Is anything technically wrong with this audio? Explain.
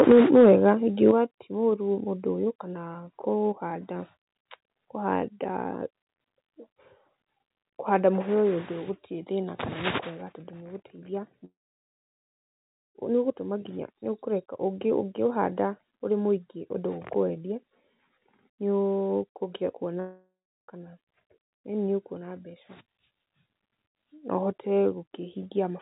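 Yes. Microphone overload occurs from 0.0 to 0.7 s and again from 1.06 to 1.1 s, just before "ti mũru". The input was likely set too high, so peaks exceeded the converter's limit by about 6 dB, then about 1 dB. Their flattened tops add a harsh crackle to the loudest speech.

Microphone volume stepped down at 0.12 s, 1.11 s and 8.22 s, by about 4, 7 and 3 dB. The call software likely reacted to the clipping by lowering the input gain in one step, so speech and background drop abruptly. The 1.11 s step follows the second overload, just before "ti mũru".

Long network dropout occurs from 11.45 to 12.98 s and from 20.00 to 20.65 s, likely because packets stopped arriving. The receiver extends the last sound briefly before it fades. The first gap loses 1.5 s of speech and is mostly silence. The second loses 0.63 s, with about a third of a second of silence. Speech resumes after each gap with that stretch missing. 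Through the G.711 call path, nothing is heard above 4 kHz.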